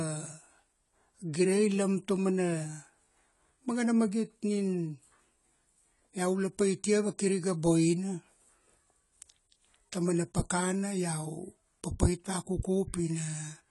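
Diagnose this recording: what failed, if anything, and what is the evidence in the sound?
AAC compression damage runs through the whole speech clip and points to the codec stage. Nothing sounds above 11.5 kHz, where the encoder has cut the band short, and the audible smearing and fizzy, warbling texture on sibilants and held sounds come from coarse quantisation of each frame's spectral lines, with gaps or substituted noise in the upper bands. The likely cause is an AAC-LC encode at a bitrate around 32 kbps.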